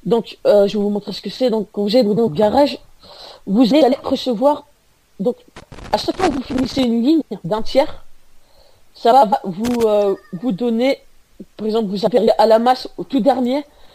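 Throughout, the sound is watery and swirly, with smeared attacks. That is likely MP3 compression, and the damage fits a low bitrate around 64 kbps.

At 2.06 to 2.28 s, frames out of order: two adjacent blocks of about 0.1 s play swapped. It sounds like a garbled flutter. No time is lost. The same fault recurs at 3.71 to 3.93 s.

From 5.57 to 6.83 s comes loose connector crackle. A faulty contact rapidly breaks the signal, giving an irregular burst of scratching.

Frames out of order returns at 7.21 to 7.43 s and 9.11 to 9.33 s. The block length fits four-frame runs.

A short loose connector crackle burst follows at 9.65 to 9.83 s.

A final frames-out-of-order flutter falls at 12.06 to 12.29 s.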